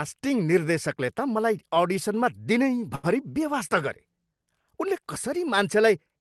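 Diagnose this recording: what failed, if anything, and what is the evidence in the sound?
A short stall from a late packet in the network and jitter-buffer stage: from 2.95 to 3.06 s, just before "बेवास्ता गरे", a sound is held about 80 ms too long, then the speech resumes where it stopped. Unlike packet loss, nothing is skipped; the audio is only delayed.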